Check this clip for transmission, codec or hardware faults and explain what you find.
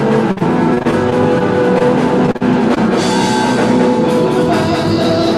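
Three kinds of fault are present. One runs through the whole clip, and two are packet-loss problems in the first three seconds.

Doubled audio track, throughout. A second full-band copy of the sound trails the original by around a fifth of a second. It sits about 5 dB lower. It has no decay and no room colour, so it is not a reverb. The sound is a flat, out-of-step echo behind everything. The likely cause is the same audio being captured twice, once through a slower path.

Repeated packet loss (robotic sound), from 0.31 to 1.42 s and from 2.26 to 2.78 s. Packets went missing again and again in each stretch. The receiver patched each hole by stretching the last sound forward. Patching covers about 15% and about 19% of the two spans. The longest gaps are about 50 ms and 41 ms. The result is choppy, with pieces of sound dropped.

Short concealed packet loss, from 1.78 to 1.82 s. About 20 ms of audio arrived too late to decode. 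The decoder filled it by continuing the preceding sound, then blended back into the real signal. The fill lasts about 18 ms. It is heard as a brief smear or wobble, and any very short sound in that moment can disappear.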